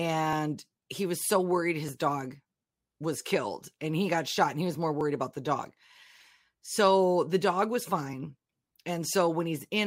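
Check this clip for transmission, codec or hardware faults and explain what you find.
One fault is present: clock drift buffer slips. From 0.33 s to 9.69 s the speech carries a click roughly every 1.56 s, about seven in all. The likely cause is two devices on separate clocks disagreeing by something like 700 ppm, so the buffer between them drifts until a block of roughly 50 samples is dropped or repeated. Random packet loss gives irregular gaps. Here the ticks keep an even spacing.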